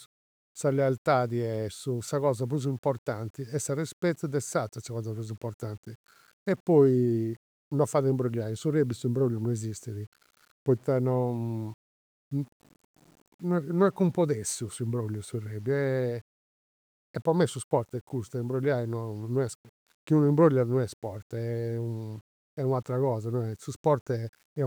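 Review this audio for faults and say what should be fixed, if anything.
The whole clip carries grainy distortion that rides on the speech itself, so quiet passages turn gritty and the softest tails sputter or drop out instead of fading smoothly. The grit sits roughly 35 dB below the signal and moves with the voice rather than behaving like a steady hiss. That points to low bit depth without dither, likely a reduction to something like 8 bits with plain rounding, where the error tracks the waveform. To prevent it, keep the master at 16 or 24 bits and add dither whenever the bit depth is reduced.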